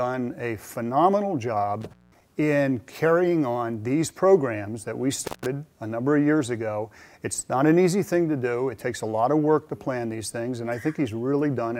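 A loose connection in the signal chain, an intermittent contact, briefly opens twice. From 1.81 to 2.24 s the line drops for about 0.19 s, and from 5.24 to 5.46 s for about 0.15 s. Each time the audio cuts out abruptly, with crackle at the edges.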